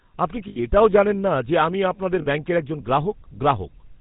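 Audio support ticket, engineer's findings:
GSM full-rate codec, throughout: buzzy, gravelly speech with nothing above 4 kHz, consistent with 13 kbps full rate. The rough pulse texture distinguishes it from a clean narrowband line.

Lost GSM frames at 0.48–0.71 s, before "জানেন না যে আমি", and at 2.22–2.27 s, between "না যে আমি আপনাদের" and "ব্যাঙ্কের একজন": the last good frame repeats, producing a metallic held ring instead of a silent gap.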